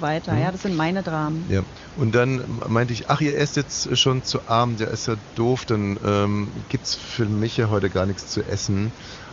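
Speech recording with no technical faults to report.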